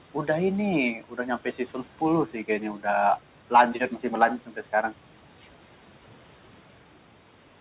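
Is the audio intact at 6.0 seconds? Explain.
No. At 6.0 seconds the noise suppressor artifacts that run through the whole clip are present. The suppressor estimates which frequency bands hold steady background noise and pulls them down frame by frame, by about 12 dB here. The room noise, sitting about 19 dB below the speech, dips away in pauses and comes back under the talking. The narrow top end, nothing above 4 kHz, fits G.711 mu-law on the call path.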